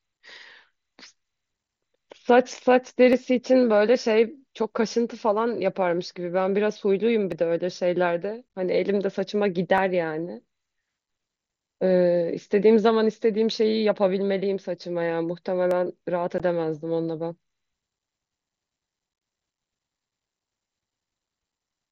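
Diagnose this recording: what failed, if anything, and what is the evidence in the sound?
A driver or buffer stage most likely slipped, losing a fraction of a millisecond of samples each time. These dropped samples make the waveform jump, giving single sharp clicks at 3.13, 7.32, 9.78 and 15.71 s, each a thin vertical line across the spectrum.

The Bluetooth link between headset and phone lost voice packets with no concealment, so silence or an idle pattern filled the gaps. This unconcealed Bluetooth headset packet loss cuts abrupt holes in the speech. From 8.49 to 8.55 s, 37.5 ms go missing in runs up to 15 ms, heard as a rough chop. A single 15 ms hole falls at 16.38 s. From 19.13 to 19.21 s, 52.5 ms go missing in runs up to 22.5 ms. The gap lengths fit 7.5 ms packets, carried by the mSBC wideband codec.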